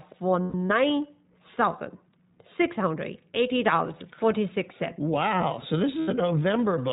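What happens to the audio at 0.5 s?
At 0.5 s you're in the middle of a burst of lost iLBC frames, running from about 0.42 to 0.72 s. Roughly 160 ms of audio drops out, scattered across that stretch, with the longest single gap around a tenth of a second. The decoder fills each hole by repeating the last pitch cycle with some noise mixed in, so you get a held, slightly buzzy vowel. Because each frame decodes on its own, the sound snaps back almost immediately.

Underneath that, the whole clip carries the iLBC codec's character. The speech is band-limited with nothing above 4 kHz, and the clearly audible rough, slightly synthetic texture fits iLBC's 15.2 kbps mode with 20 ms frames, where each frame's excitation is coded independently.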